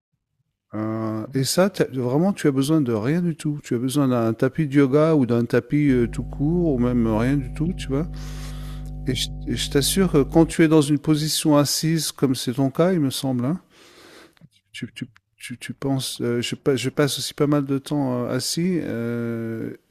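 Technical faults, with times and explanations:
5.87–10.55 s, mains hum: a steady 50 Hz tone rises under the speech, only about 10 dB below it, as though a ground loop or nearby transformer were coupling the power line into the signal path. It is a constant low drone that does not follow the speech. On a spectrogram it is a bright horizontal line at 50 Hz. On the waveform, pauses show a regular low-frequency oscillation instead of a flat baseline.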